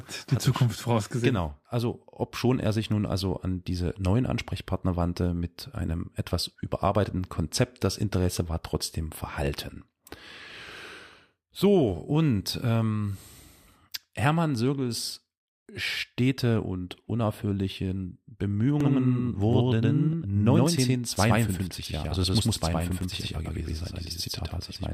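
From 18.81 s to the end, the speech is doubled: a second, equally loud copy trails the first by around a tenth of a second, giving a smeared, stuttering echo with no decay or room colour, and it switches on abruptly. This doubled audio track likely comes from the same signal being mixed in twice, either captured again through a slower path or held as two out-of-step copies in an edit.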